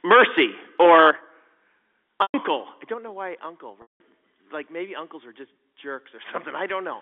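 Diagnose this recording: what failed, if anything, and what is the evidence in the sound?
Microphone overload sits at the converter stage. From 0.10 to 0.43 s and 0.80 to 1.11 s the loudest speech peaks sound harsh and crackly. They run about 8 dB past full scale, with roughly 10 to 15 percent of samples flattened. The input gain was likely set too high.

The microphone volume stepped down three times, a call-processing action. Level drops suddenly at 0.12 s by about 2 dB, at 1.11 s by about 7 dB, and at 2.94 s by about 5 dB, just before "know why uncle". The first comes during the first clipped burst and the second right after the second, so automatic gain control likely reacted to overload.

Packet loss with pitch repetition is a network fault. At 2.22 to 2.34 s, 120 ms goes missing, and at 3.82 to 4.00 s, just after "know why uncle", 180 ms. Both gaps are longer than the receiver can bridge, so the repeated buzzy pitch fades out to silence before speech cross-fades back.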